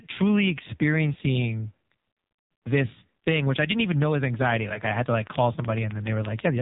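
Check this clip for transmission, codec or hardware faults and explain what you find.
The clip has two faults: heavy narrowband mobile coding throughout, and two short dropouts where speech frames were lost.

Throughout, the speech sounds buzzy, muffled and synthetic, with nothing above 4 kHz. This is the AMR narrowband mobile codec. It rebuilds speech from a vocal-tract model driven by a few pulses in each frame, and the heavy damage here fits a low bitrate of around 5.9 kbps. At that rate too little detail survives, so the voice takes on a coarse, artificial edge.

Lost AMR speech frames cause two brief disruptions. From 2.12 to 2.16 s, between "truly experiencing" and "this thing which i", the sound is drawn out and fades for about 40 ms, which points to two consecutive frames lost. From 4.74 to 4.82 s, just after "even know is anxiety", a shorter glitch fits a single lost 20 ms frame. 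In both, the decoder filled the gap by repeating its last good pitch and vocal-tract settings at falling gain.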